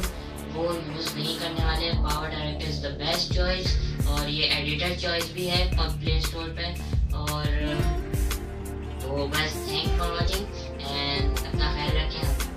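At 10.27 to 10.29 s there's a case of compressed frames being skipped: a couple of frames never got played, either missing or rejected by the decoder as damaged, so the audio jumps ahead by roughly 50 ms, leaving a short audible break in continuity at the join.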